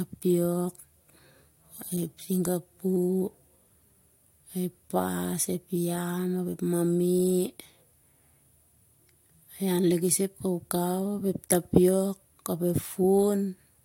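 No technical faults are audible anywhere in the speech.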